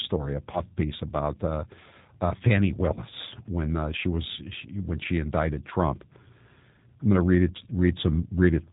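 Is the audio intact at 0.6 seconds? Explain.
No. At 0.6 s the sound is inside a stretch of VoIP packet loss concealed by the speech codec, running from 0.52 to 0.62 s. About 20 ms of audio went missing, which fits a single dropped packet. The decoder filled the gap by extending its last pitch and filter settings at falling gain. That gives a brief buzzy or noisy, fading patch. The speech stays weak and smeared for tens of milliseconds after about 0.62 s.

Under this, the whole clip carries the G.729 codec. It rebuilds speech from a vocal tract model and a few pulses per frame, at a rate that fits 8 kbit/s. Nothing above 4 kHz survives. The speech sounds plainly rough, muffled and slightly synthetic.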